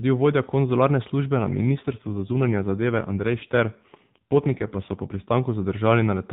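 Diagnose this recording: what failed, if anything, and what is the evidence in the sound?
From 1.40 s, right after "vodja konzularne službe", until 5.29 s, the voice turns rougher, buzzier and more synthetic, then regains its earlier smoothness. The band stays capped at 4 kHz throughout, as usual for AMR narrowband, and there is no gap. This is an AMR rate drop at the network and codec stage. The link ordered a lower codec mode, leaving fewer bits for the vocal model. The degradation fits a step from 12.2 kbps down to 5.9 kbps and back.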